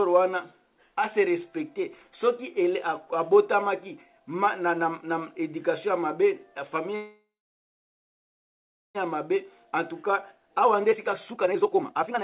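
From 6.96 to 8.97 s the sound stalls into about 2 s of fading fill and near silence, then resumes intact; this call audio freeze likely came from delayed packets draining the jitter buffer. From 9.36 s to the end it plays hurried at unchanged pitch, about 131% speed, as the jitter buffer speed-up trims roughly a second of the backlog over the 4 kHz G.711 band.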